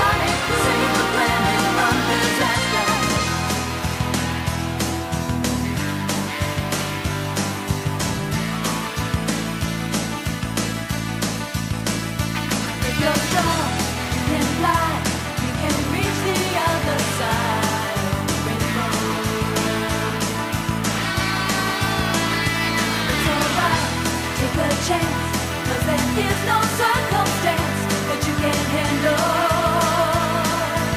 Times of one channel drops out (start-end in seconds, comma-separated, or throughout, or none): none